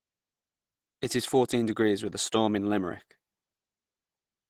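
From start to finish the speech sounds muffled, hoarse and grainy, with the plainly audible damage of likely Opus compression at a low rate, around 16 kbps in its hybrid speech mode. Unlike MP3, there is less swirling and fewer holes; the texture roughens instead.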